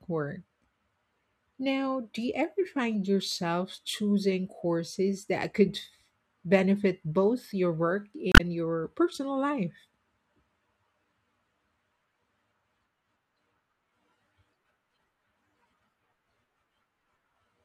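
From 8.32 to 8.41 s the speech runs into damaged data in a compressed stream: corrupted bytes leave the decoder unable to read those frames, so it loses sync and hunts for the next valid header, producing a brief chirp, squawk, click or short hole lasting about 90 ms.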